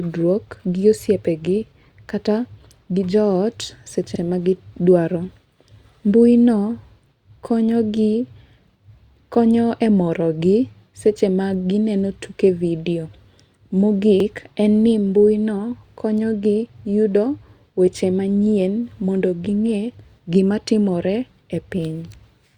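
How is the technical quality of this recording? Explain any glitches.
The speech has two brief stutters, at 4.16–4.20 s and 14.20–14.25 s, where about 48 ms of sound plays twice. This is overlapping chunks: the audio was handled in 10-second blocks, and each new block began slightly before the previous one ended, duplicating the seam.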